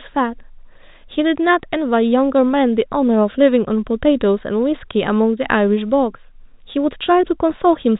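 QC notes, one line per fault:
Nothing to flag on this one: the speech comes through the G.711 telephone coding as expected, with the usual ceiling at 4 kHz and nothing else catching the ear.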